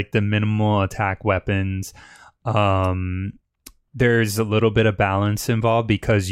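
No technical faults can be heard in the recording; the signal comes through intact, with nothing interrupting or disturbing it.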